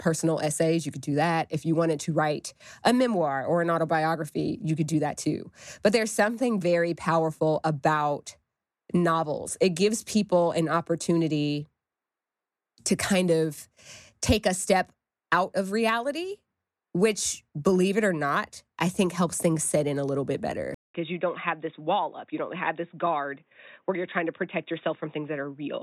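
Speech that, right after "in a little bit" at 20.74 s, drops out for 200 ms and returns duller and somewhat quieter, with nothing above 3.8 kHz and faint new background noise. The likely cause is an input switched to a poorer device. The gap and the changed noise floor set it apart from a simple filter or EQ change.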